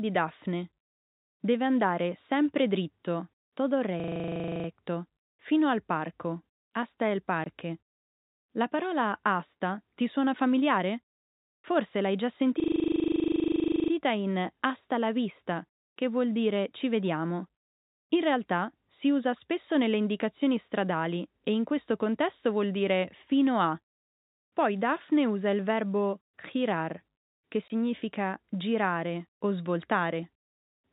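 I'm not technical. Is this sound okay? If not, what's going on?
No, there are two kinds of problem here.

A system hang loop happens twice, from 4.0 to 4.68 s and from 12.6 to 13.92 s. The computer briefly froze while the sound hardware kept replaying the same 40 ms snippet, about 25 times a second, so you hear a rattling buzz. Afterwards the speech carries on with little or nothing missing.

There's also packet loss filled with silence at 7.44 s and 27.68 s. A 20 ms chunk of the speech never arrived, and the gap was filled with silence. You hear a tiny hole with hard edges.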